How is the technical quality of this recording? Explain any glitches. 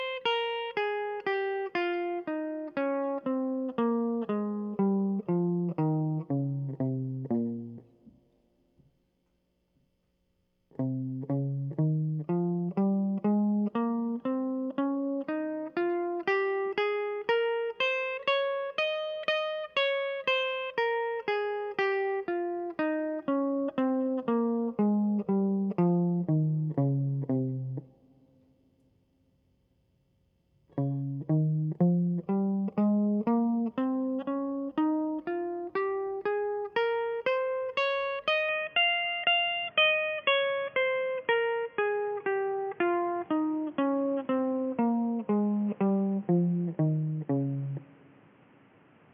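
The music loses quality near the end. From 38.49 s to the close it turns dull and boxy, with nothing above 3.4 kHz, and new background noise sits about 30 dB below it, with no gap and no level jump. The likely cause is the input switched to a poorer device, whose narrower band and own noise replace the original path.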